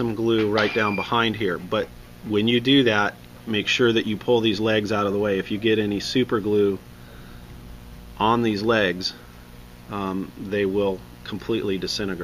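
Mains buzz runs through the whole clip, sitting roughly 25 dB below the signal. Switching spikes from a dimmer, a rectifier or a missing shield enter twice per 60 Hz cycle, so harmonics stack up into several kilohertz, heard as a steady, raspy buzz.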